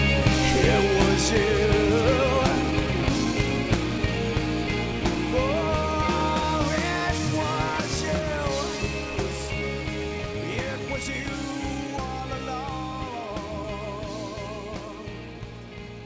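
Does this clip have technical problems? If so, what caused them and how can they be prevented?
Yes. There's clock drift between sender and receiver running through the whole clip: the sending device's audio clock is ahead of the receiver's by roughly 4 percent, so samples arrive faster than they're played out and the jitter buffer keeps creeping fuller. The receiver has to keep trimming to stop the backlog from growing. Preventing it comes down to having the receiver resample against the sender's actual rate rather than trusting nominal clocks.

That trimming is what you hear as repeated timing corrections from about 1.58 s to 16.00 s. The receiver drops short slices to keep pace, which effectively runs the audio at about 105 percent speed. The cuts all go the same way but land at uneven spacing. It's the same fix: smooth drift compensation through continuous resampling avoids these discrete cuts. 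The call path itself is G.722 at 64 kbps, and nothing above 8 kHz comes through, which fits the codec's 16 kHz sampling rate.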